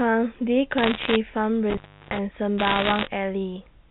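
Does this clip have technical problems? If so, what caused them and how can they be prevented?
Yes. Bit errors on a digital phone line appear from 0.78 to 1.16 s and again from 2.58 to 3.08 s as crackle over the speech. Individual flipped bits in the G.711 stream corrupt single samples, and a hit on a sign or high-order bit becomes a sharp tick. The error rate is roughly a couple of percent. Error-correcting transmission or a cleaner digital link prevents this.

Intermittent contact runs from 1.70 to 2.19 s. A loose plug or cable opens for about 0.34 s, so the sound drops out, with crackle at each edge and faint hiss while the connection is broken. Secure connectors and strain-relieved cables prevent it.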